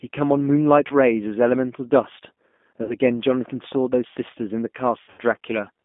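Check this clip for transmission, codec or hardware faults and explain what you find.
Two faults are present: G.729 coding across the whole speech clip, and three dropouts concealed by that codec.

G.729 codec, throughout: the speech is rebuilt from a vocal tract filter, a pitch predictor and a few pulses per frame. The sound fits an 8 kbit/s G.729A stream, limited to roughly 200 Hz to 3.5 kHz, and it sounds plainly rough and synthetic.

VoIP packet loss concealed by the speech codec, at 0.88 to 0.92 s, 2.83 to 2.95 s and 5.02 to 5.21 s: each time, the decoder filled the gap by repeating its last pitch and filter at falling gain. About 20 ms is missing at the first and 60 ms at the second. The third loses about 140 ms scattered over 160 ms, with its longest gap 80 ms. The speech is stretched into a buzzy tone or coloured noise that fades, then stays weak briefly after the gap.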